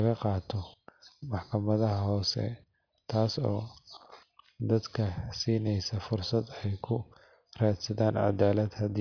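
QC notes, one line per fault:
No technical faults were found in this speech recording, and the signal holds together as one continuous path from the first sample to the last.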